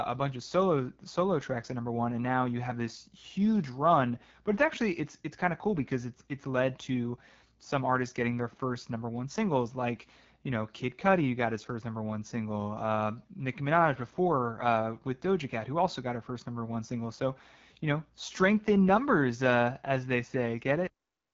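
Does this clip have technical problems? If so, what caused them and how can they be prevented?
Yes. Throughout the speech, the sound carries the signature of the AMR wideband (HD Voice) codec. Nothing is present above about 7.3 kHz, and the codec damage is plainly audible as a rough, raspy edge. That roughness fits one of the lowest AMR-WB modes, around 8.85 kbit/s, where the pulse-driven vocal tract model has too few bits to describe the voice. Prevention: carry the call at 12.65 kbit/s or higher, or record locally rather than over the phone link.

The clip also has a cut-off end at 20.87 s. The speech stops mid-sound and drops straight to digital silence with no natural decay, then stays silent to the end. This happens when the final buffers are never written or played out, so the recording ends abruptly instead of closing cleanly. Prevention: flush and close the recorder properly, and keep it running a second or two past the last spoken sound before stopping.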